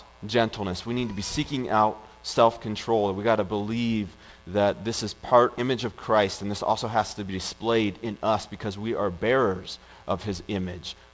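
Skip ahead, 5.58 to 5.60 s: roughly a second of audio was discarded while later audio was already queued, so playback leaps forward with no gap filled in. The sound on either side of the jump is joined almost directly, and the missing stretch is simply gone.

Jitter buffer speed-up, 5.68 to 7.61 s: right after the jump, the receiver was still holding more audio than its target. It trimmed short pitch-period slices again and again, removing something like 150 ms, so the sound runs about 6% fast at unchanged pitch and feels slightly hurried. This happens over a G.722 call path whose band stops at 8 kHz.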